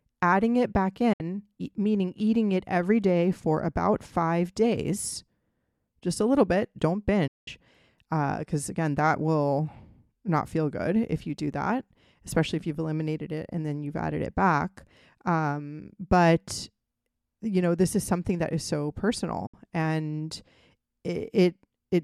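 Digital broadcast dropout at 1.13 s after "adding it back", at 7.27 s, and at 19.46 s after "something that is so". The receiver lost good frames and muted with a quick 8 ms fade, leaving silent holes of 64, 192 and 64 ms, which fits whole 32 ms frames going missing.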